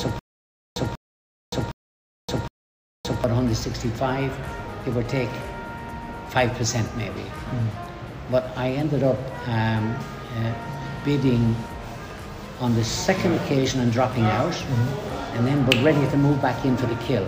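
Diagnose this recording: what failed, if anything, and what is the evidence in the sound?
Stutter with silent gaps from the start to 3.24 s: a 190 ms burst returns every 762 ms between digital silence, likely a stalled stream. Repeated fragments distinguish it from plain dropouts.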